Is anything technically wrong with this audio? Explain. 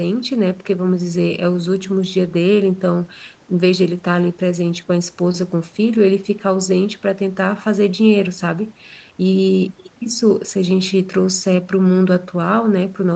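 No, nothing in this speech clip points to a technical fault. It has been through a call's microphone processing and codec, which leaves nothing above 8 kHz.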